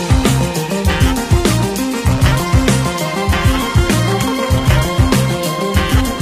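Adaptive stream at a lower bitrate from 3.16 s to the end: the audio abruptly switches, without a gap, to a lower-bitrate version, fitting a 20 kbit/s HE-AAC stream, with nothing above 14.9 kHz.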